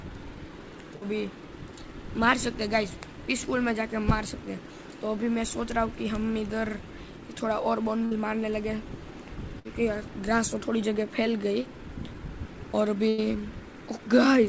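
Four bursts of packet loss break the sound, at 0.96, 8.05, 9.59 and 13.09 s. Each time the receiver stretches the last sound and fades it. About 60 ms is lost in the first three, and 100 ms at 13.09 s.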